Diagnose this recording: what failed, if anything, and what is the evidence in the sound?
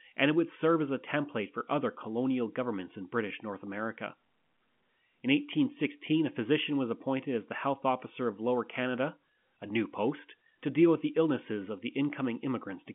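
Nothing in this speech recording points to a failure at any stage. It carries the narrow band of G.711 telephone coding, roughly 150 Hz to 3.4 kHz with nothing above about 3.7 kHz, and any quantisation noise from the logarithmic 8-bit coding is faint at most.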